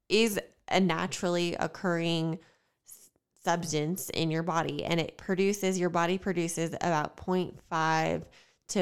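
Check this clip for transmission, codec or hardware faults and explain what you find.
Nothing in this speech recording points to a fault anywhere along its chain. No moment in it calls for a timing or an explanation of a mechanism.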